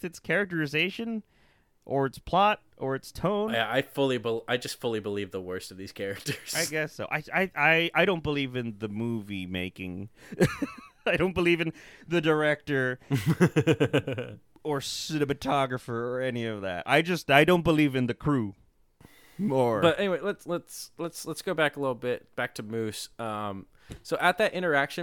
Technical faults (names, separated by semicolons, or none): none